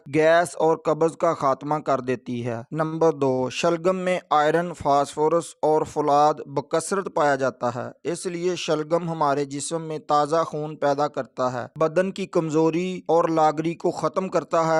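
At 2.86 to 2.94 s and again at 3.34 to 3.40 s there is a short stall from a late packet. The jitter buffer ran empty, so the last sound was held for 57 ms, then 39 ms. Nothing is lost. The sound just lingers briefly, with a faint buzz or dip.

From 13.87 to 14.45 s comes a jitter buffer speed-up. Too much audio had built up, so tiny pitch-period slices were cut repeatedly, about 50 ms in all. Playback runs at 108% with unchanged pitch, sounding rushed.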